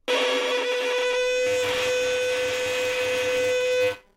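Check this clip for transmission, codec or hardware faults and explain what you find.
One fault is present: buffer tearing, from 1.46 s to the end of the clip. The writing program and the playback hardware have slipped out of step on the ring buffer, so they cross within every period. A small slice of each 5 ms buffer replays audio from roughly 20 ms earlier, bounded by hard joins. The result is a steady robotic 200 Hz buzz riding on the sound wherever there is signal.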